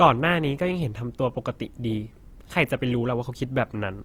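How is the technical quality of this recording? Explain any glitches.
The quality takes a clear hit from compression across the whole recording, so the problem isn't any single glitch.

From start to finish, the speech has a grainy, rough texture, with a noisy sheen where the tonal parts of the voice should be clean. That's the sound of Opus compression, likely in its music-oriented CELT mode. Starved of bits, it holds each band's overall energy but patches in folded or noise-like content instead of the real detail. The bandwidth still reaches about 20.2 kHz, so it isn't muffled. The damage fits a low bitrate of around 24 kbps.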